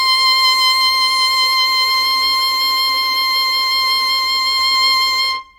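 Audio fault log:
No audible faults detected.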